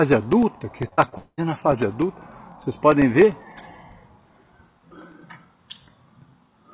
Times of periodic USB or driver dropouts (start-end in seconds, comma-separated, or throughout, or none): 0.12-6.74